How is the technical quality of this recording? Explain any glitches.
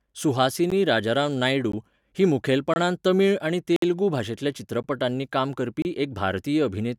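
The recording has a recurring fault: a gap between stream segments, six times. Brief silences fall at 0.70 s, 1.72 s, 2.74–2.76 s, 3.76–3.83 s, 4.83 s and 5.82–5.85 s, roughly once per second, matching 1-second segments. Each segment's timestamps leave a small hole that the player fills with silence, 14 to 60 ms long. The speech cuts out abruptly. Nothing is lost. On a waveform each hole is a flat, hard-edged break, and on a spectrogram it is a thin vertical blank strip.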